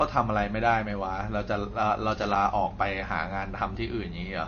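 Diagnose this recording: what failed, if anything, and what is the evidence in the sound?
The codec stage likely did most of the damage: the speech sounds like it went through bit-starved MP3 encoding. The encoder ran short of bits and cut the treble, so nothing is left above 6.6 kHz for the whole recording, which fits a bitrate somewhere around 33 kbps. Weak frequency lines drop in and out from frame to frame, giving a plainly audible watery, swirly quality, with chirpy s sounds and softened consonant attacks.

In the analogue wiring, a loose connector crackle runs from 2.18 to 2.36 s. A worn or dirty contact in the signal path was making and breaking rapidly, probably as the cable or plug moved. Each break chops the signal, and any DC on the line turns the make-and-break into pops. The result is a short, irregular burst of scratchy crackle lasting under a fifth of a second.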